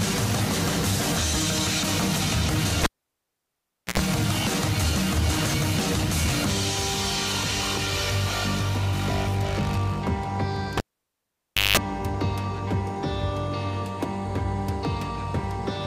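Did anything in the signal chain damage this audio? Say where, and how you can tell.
Yes, a cable pulled and plugged in, in the analogue wiring, at 2.84 to 4.00 s and 10.77 to 11.77 s. Each event starts with a pop and a gap of near silence. A brief mains buzz follows, at 60 Hz then 50 Hz. A digital dropout would lack that buzz and the closing pop.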